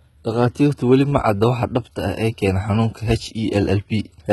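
Across the whole clip the treble sounds synthetic: sibilants come out gritty and lisped, with a metallic sheen that does not match the harmonics of the lower voice, and nothing is present above about 11.8 kHz. This is likely HE-AAC compression, heavily applied, at a rate that points to something near 16 kbps, where only the lower band is coded and the upper band is rebuilt by copying it upward under a coarse envelope.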